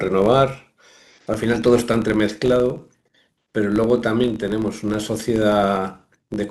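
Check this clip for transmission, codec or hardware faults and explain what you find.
There is one fault, and it runs through the whole speech clip. A filter is restarted on every block. It loses its stored state at each block boundary and starts again from silence. So every block opens with a small transient. Those transients repeat at 50 Hz, which points to blocks about 20 ms long. The result is a steady buzz under the speech. It rises and falls with the level of the talking.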